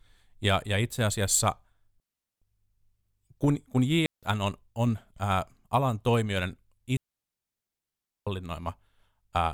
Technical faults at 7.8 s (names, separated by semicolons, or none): digital wireless dropout